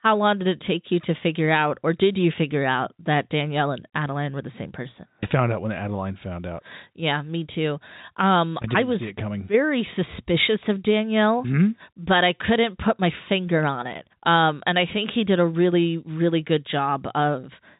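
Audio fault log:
Nothing stood out on listening to this speech, which carries the narrow band of ordinary telephone coding, with nothing above about 3.8 kHz.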